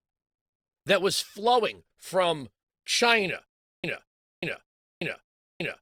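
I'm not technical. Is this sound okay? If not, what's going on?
No. From 3.46 s to the end, the speech breaks into a stutter with silent gaps: the same 0.21 s snippet plays four times, each followed by about 0.38 s of dead silence. Unlike a simple dropout, the fragment repeats at an even beat. A stalled stream is the likely cause.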